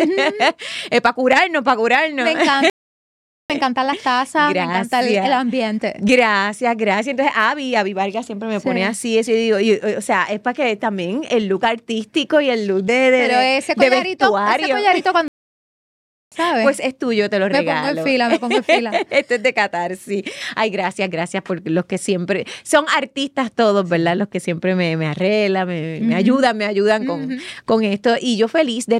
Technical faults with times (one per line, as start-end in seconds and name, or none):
2.70-3.50 playback stall
15.28-16.32 playback stall